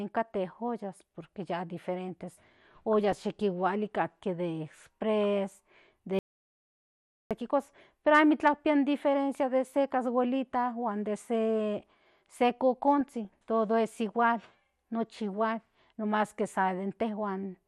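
MP2 compression runs through this whole speech clip: it sounds dull and plainly gurgling, with a granular edge on the upper range. That is the likely result of MPEG Layer II coding at a low rate, which fits about 80 kbps. The coder splits the signal into 32 sub-bands and runs short of bits, so upper bands drop out and flicker while the remaining bands are coarsely quantised. DAB burbling appears from 2.93 to 3.24 s, briefly at 5.24 s, and again from 13.01 to 13.29 s. These are short blips of noise in single sub-bands. The pattern points to weak reception, with bit errors, at a rate of a few tenths of a percent, getting past the error correction and corrupting the MP2 stream. An audio dropout to silence follows from 6.19 to 7.31 s: the sound cuts off mid-flow and about 1.1 s passes in silence, with no room tone, before the sound resumes. The likely cause is a lost input, such as a failed link or a stray mute, while the encoder kept writing silence, so whatever was said in that gap is gone.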